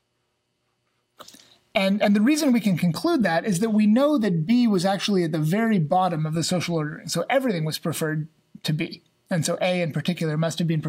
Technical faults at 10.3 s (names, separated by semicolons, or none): none